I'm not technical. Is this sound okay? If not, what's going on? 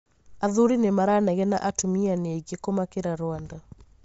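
No. Throughout, the speech sounds grainy and breathy with nothing above 7.7 kHz, likely from Bluetooth LC3 compression. Unlike plain muffling, some of that lost brightness is replaced by hiss.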